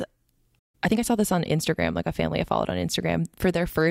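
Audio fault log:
0.59–0.75 s, playback stall: the player likely ran short of data or its thread was blocked, so the speech cuts to silence mid-flow before resuming.
0.75–1.03 s, time-compressed catch-up: to clear the backlog, the player cuts and cross-fades small slices, so the speech runs about 1.5 times faster at normal pitch.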